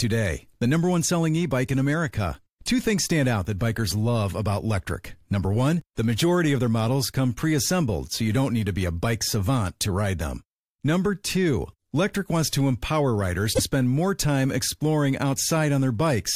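At 13.52 s the compressed speech stream carries damaged data: a short run of bytes in the encoded file is wrong, so the decoder cannot read those frames correctly, loses its place in the stream and has to hunt for the next valid frame header before normal decoding resumes. For about 80 ms, up to 13.60 s, the speech gives way to a brief chirp, squawk, click or short hole, an abrupt blip that cuts into the flow.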